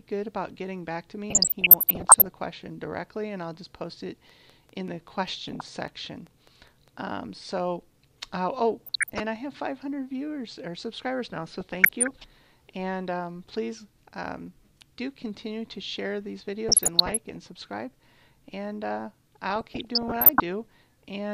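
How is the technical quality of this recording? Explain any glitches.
The recording has two kinds of fault: repeated DAB burbling and one train of clicks.

DAB burbling (1.30–2.30 s, 5.38–5.68 s, 8.81–9.20 s, 11.61–12.11 s, 16.69–17.36 s, 19.50–20.40 s): weak reception lets bit errors, under one percent, corrupt scale factors, so sub-bands jump in level.

Train of clicks (4.30–6.89 s): around fifteen regularly spaced, similar clicks at about 5 per second, likely from interference or a faulty connection, tick roughly as loud as the audio itself.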